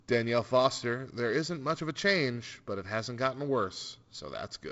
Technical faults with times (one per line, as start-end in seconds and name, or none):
none